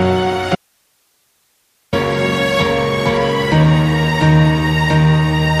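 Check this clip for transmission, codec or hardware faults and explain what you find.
There is one fault, an audio dropout to a faint residue. From 0.55 s to 1.93 s the sound cuts out abruptly for about 1.4 s. Only hiss remains, around 45 dB below the signal. The likely cause is a lost signal feed while the downstream path stayed live. The return is just as sudden.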